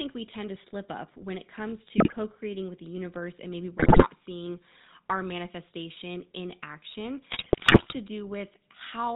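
A speech recording carried over the GSM full-rate codec, with plainly audible damage throughout. The codec rebuilds the voice from a vocal-tract model driven by sparse pulses, so it sounds buzzy and gravelly. Nothing above 4 kHz survives, which fits the 13 kbps full-rate coder. GSM bit errors break the sound three times: 1.98 to 2.15 s, after "up when it comes"; 3.78 to 4.08 s, after "the universe and maybe"; and 7.30 to 7.95 s, after "our manifestation in action". Corrupted filter, pitch and gain values warp the spectrum and level, causing squawks, pops and gargling. The damage points to an error rate of roughly 5 to 7 percent.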